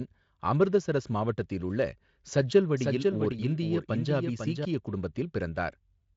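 Speech, carried through a Speex codec that cuts everything above 7.7 kHz with little or no damage, has a doubled audio track from 2.77 to 4.65 s. A second full-band copy of the speech runs about half a second behind the first. It sits roughly 5 dB below the original. It has no decay or room colour. It switches on and off abruptly at both ends. The likely cause is a second, slower capture path mixed in alongside the direct one.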